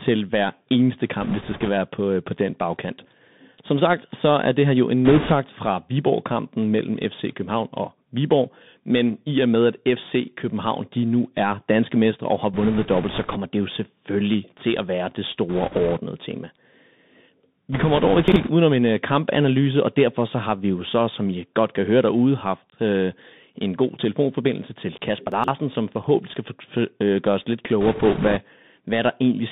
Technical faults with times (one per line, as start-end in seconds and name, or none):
0.00-29.52 Bluetooth CVSD headset codec
1.22-1.69 bit errors on a Bluetooth voice link
5.05-5.32 bit errors on a Bluetooth voice link
12.54-13.38 bit errors on a Bluetooth voice link
15.49-15.99 bit errors on a Bluetooth voice link
17.72-18.50 bit errors on a Bluetooth voice link
18.28-18.36 chunks out of order
25.32-25.48 chunks out of order
27.81-28.38 bit errors on a Bluetooth voice link